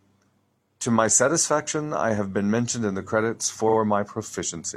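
Speech, with a quick stutter from repeated frames at 3.65–3.74 s. A 42.7 ms slice, which fits one compressed frame, gets played twice more than it should, and adds about 85 ms to the clip.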